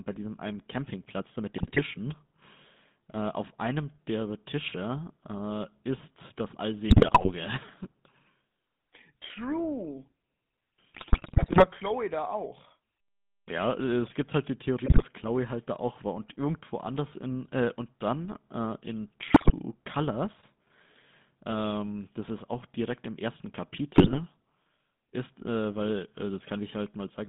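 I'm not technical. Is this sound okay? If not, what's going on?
No. The whole call went through the GSM full-rate codec, an old mobile-phone speech coder that rebuilds the voice from a rough model and cuts off everything above about 3.6 kHz. That leaves the speech sounding buzzy, gravelly and muffled throughout.

On top of that come GSM bit errors: a weak radio link corrupted some of the data the phone decoded, so brief stretches break into squawks, pops and gargling at 1.58, 6.9, 10.94, 14.86, 19.28 and 23.94 s, the longest lasting about 0.7 s.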